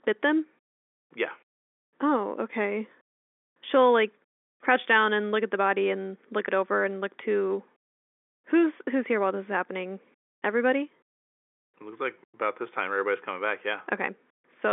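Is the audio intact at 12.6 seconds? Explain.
Yes, at 12.6 seconds the speech is intact, with no fault at that moment, only the narrow telephone band of the G.711 line, which passes nothing above about 3.7 kHz.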